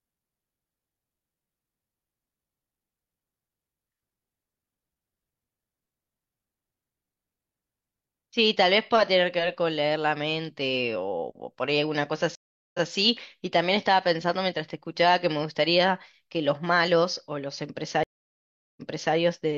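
At 12.35 s and 18.03 s, stream reconnects cut the speech to silence for 392 ms and 737 ms. A fresh decoder then resumes 171 ms and 384 ms earlier, so audio repeats. A plain dropout would skip ahead instead.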